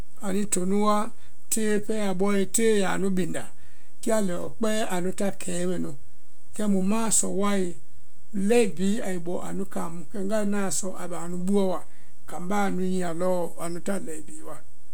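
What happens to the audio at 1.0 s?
At 1.0 s the speech sits on a DC offset that runs through the entire clip rather than starting there: every sample is pushed away from zero by a fixed amount of about -23 dBFS. You can't hear the shift itself, but it eats into headroom on one side. On a waveform display the trace rides visibly off the centre line, and a spectrogram shows a steady band of energy pinned at 0 Hz.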